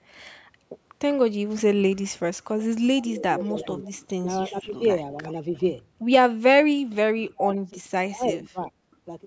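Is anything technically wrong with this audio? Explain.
Yes. Speech suppressed in double talk: at 2.91–3.89 s, 4.46–4.83 s and 7.25–8.75 s the speech dips and breaks up, most deeply (about 35 dB) in the last stretch. The likely cause is an echo canceller turning both sides down while they overlapped.

Echo leak: a faint copy of the speech, 348 ms late, appears at 3.44–3.84 s (about 20 dB down) and again, barely, at 5.55–5.63 s. This is likely loudspeaker echo the canceller failed to remove.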